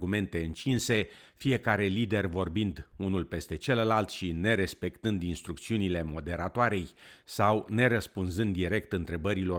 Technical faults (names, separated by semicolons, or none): none